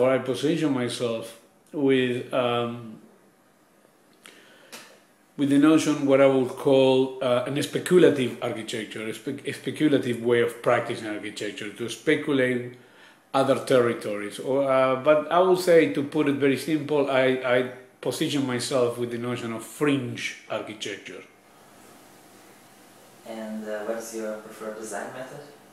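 No technical faults can be heard anywhere in the recording. Nothing breaks up, drops out or distorts at any point.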